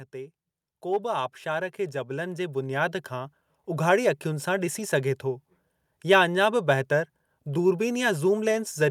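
From 0.12 to 5.05 s the speech and background swell together by about 12 dB: automatic gain rising, as the gain control slowly boosted an input it judged too quiet.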